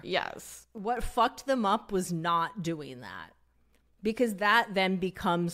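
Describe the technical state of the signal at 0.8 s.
From 0.78 to 0.97 s the sound abruptly steps down by about 6 dB, likely because one channel drops out before the mono sum. Unlike a full dropout, it halves rather than going silent.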